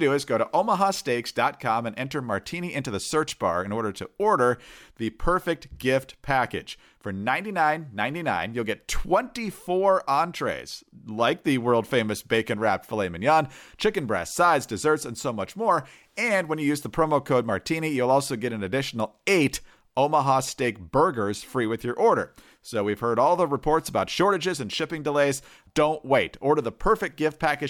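No technical faults can be heard anywhere in this recording.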